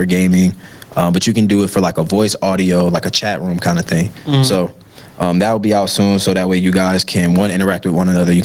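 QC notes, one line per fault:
Throughout: gain pumping. The gain swings by around 20 dB, and the room noise sits about 44 dB below the speech. Loud and quiet syllables land closer in level and the delivery sounds squashed, the likely cause being input gain set far too high with a fast limiter clamping each peak.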